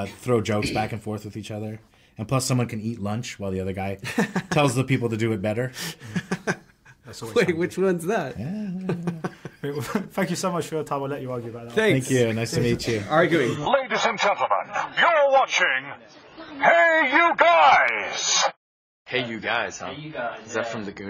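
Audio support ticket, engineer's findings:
Adaptive stream at a lower bitrate, 13.56 s to the end (21.10 s): sudden quality drop with no gap, coding artefacts rise, and nothing above 7 kHz. This points to a switch from roughly 96 to 16 kbit/s AAC.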